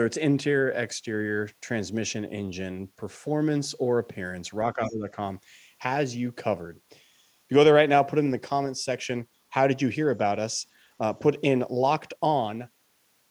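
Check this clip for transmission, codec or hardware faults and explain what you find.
Two echo-cancellation faults occur close together, both near the 5-second mark.

From 4.74 to 5.09 s the speech dips by about 15 dB for roughly a third of a second, losing level. This is speech suppressed in double talk. Both ends were likely talking at once, and the echo canceller attenuated the near talker along with the echo.

Inside that dip, from 4.84 to 4.93 s, a faint scrap of the other side's voice leaks through, roughly 30 dB below the main speech. The echo canceller likely left some far-end loudspeaker pickup in the microphone signal.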